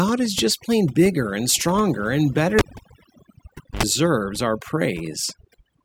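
From the start, the speech carries overdone noise removal. The reduction was set so hard that any frequency band hovering near the estimated noise floor gets pushed down or switched off, taking the quieter parts of the voice with it. The background sinks to near silence dotted with twinkling, chirpy specks. Unlike a low-bitrate codec, the artefacts gather in the gaps and soft edges rather than spreading evenly over loud passages.

At 2.59 s a cable pulled and plugged in interrupts it. A pop opens a gap of about 1.19 s of near silence while the signal path is broken. Then a short burst of 50 Hz mains buzz, about 76 ms long, comes through as only the plug tip makes contact, and a second pop at 3.83 s marks the sound's return. That buzz-and-pop pairing sets it apart from a plain dropout or a muted channel, which would cut cleanly without hum.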